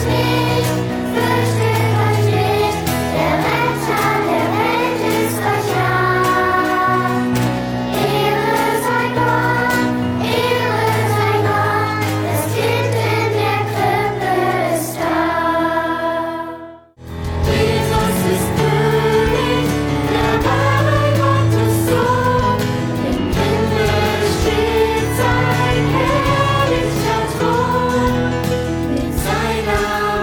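No technical faults can be heard anywhere in the recording.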